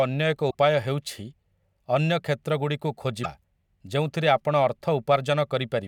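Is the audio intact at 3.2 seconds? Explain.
No. Between 3.23 and 3.26 s, about 28 ms, the speech jumps ahead. This is likely a broken MP3 bit reservoir. MP3 frames store part of their data in space left over in earlier frames. When frames are cut out, the next frame reaches back into bytes that now belong to a different frame, decodes nonsense and skips forward. The span fits a lost frame of about 24 ms.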